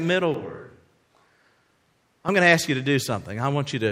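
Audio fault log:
0.34–2.29 s, switch to a distant microphone: speech abruptly turns roomy, hollow and bass-light, about 5 dB quieter with faint room noise, likely a far microphone standing in for the close one.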